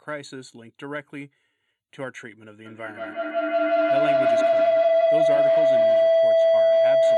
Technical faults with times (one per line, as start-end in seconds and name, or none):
2.65-7.18 feedback howl